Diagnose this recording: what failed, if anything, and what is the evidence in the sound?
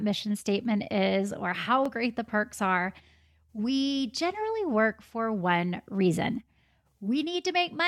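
Bluetooth stutter on the wireless link, 1.86 to 1.89 s: the receiver replays a short slice, consistent with one lost frame of about 21 ms, before speech resumes further on.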